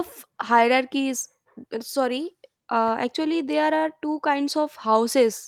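No technical faults are audible.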